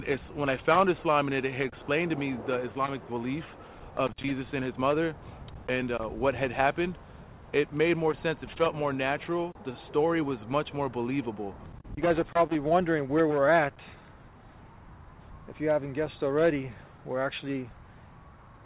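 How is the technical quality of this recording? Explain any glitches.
No glitches can be heard: the sound comes over a WebRTC call path whose bandwidth stops at 4 kHz, which fits 64 kbps G.711 mu-law telephone coding, and nothing in it departs from what that kind of link normally delivers.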